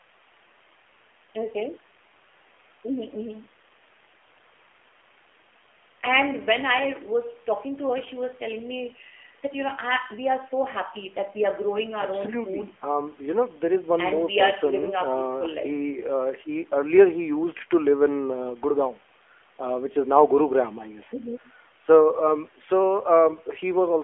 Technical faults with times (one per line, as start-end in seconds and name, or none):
0.00-24.04 AMR narrowband mobile codec